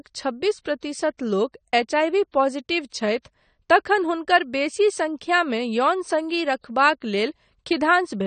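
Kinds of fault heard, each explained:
AAC compression: The speech sounds dull and smeared throughout, with a fizzy, warbling texture on sibilants and nothing above 9 kHz. The likely cause is AAC-LC coding at a low bitrate, consistent with about 32 kbps, which quantises frequency lines coarsely and lowers the cut-off.
Pre-echo: A brief hiss runs just ahead of sharp attacks at 1.17 s and 7.0 s, spreading about 18 ms and 16 ms, and softens each onset. The codec spreads quantisation noise across its whole block, so noise meant for the loud attack leaks into the quiet moment before it.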